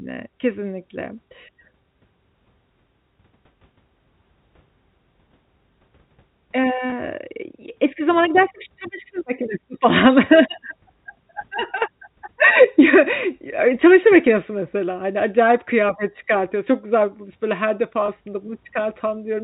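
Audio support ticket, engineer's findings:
Packet loss with pitch repetition at 6.90–6.92 s and 18.06–18.08 s. Brief held, buzzy tone. Each gap is about 20 ms, which fits one lost packet. Receiver concealment repeated the last pitch period to fill it. Gap too short to reach silence. Telephone band of the G.711 path audible, nothing above 4 kHz.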